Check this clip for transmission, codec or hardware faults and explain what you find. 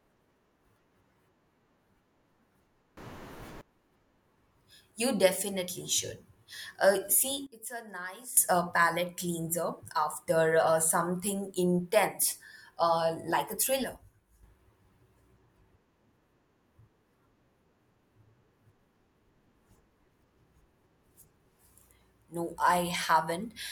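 Three level faults, all of the same kind. At 2.97 to 3.61 s, 7.47 to 8.37 s (just before "uh palate cleanser after") and 13.84 to 14.43 s (just after "intense uh like a"), the speech and background noise abruptly jump together by about +24 dB, -18 dB and -6 dB. This is a sudden gain jump, likely digital gain switched instantly without a ramp.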